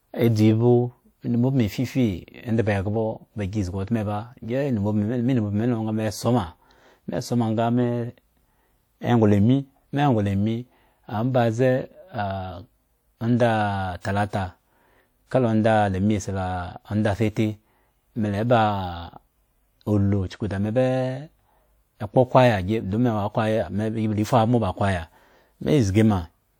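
At 14.01 s a pre-echo appears: about 42 ms of hiss arrives just before a sharp onset in the speech, because the codec's quantisation noise is spread across the whole transform block. On a spectrogram it shows as a faint broadband smear before the attack.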